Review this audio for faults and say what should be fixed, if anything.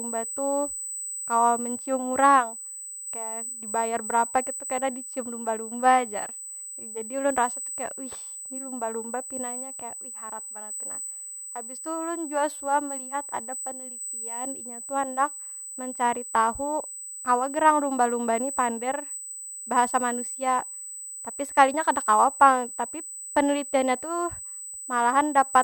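A steady high whine at 8 kHz runs under the speech for the whole clip, roughly 10 dB below it. This is USB whine: current drawn in 125 microsecond microframes leaks in through power or ground. Powering the interface from a clean supply or breaking the ground loop with an isolator would prevent it.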